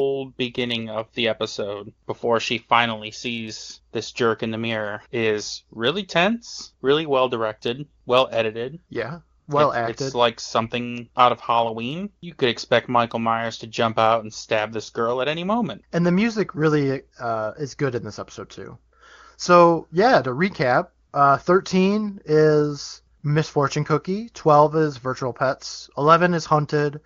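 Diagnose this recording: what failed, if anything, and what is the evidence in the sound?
The AMR comfort noise fault sits at the call-processing stage. At 9.39 to 9.47 s, 21.07 to 21.13 s and 23.19 to 23.23 s, the real background gives way to a smooth, steady synthetic hiss for 80, 60 and 40 ms. The sender stopped transmitting speech frames, and the receiver filled those gaps with generated noise. What sets this apart from packet loss is that noise replaces the background rather than silence or a repeated fragment.

A bit error spike, from the digital link or memory, gives isolated sharp ticks at 10.98 s (one sample) and 24.57 s (two samples). A flipped bit makes the waveform jump by a power of two and return at once. That explains the broadband click with no relation to the surrounding sound, unlike a buffer dropout, which leaves a gap. The AMR wideband coding around these faults stays clear, which fits a high AMR-WB rate.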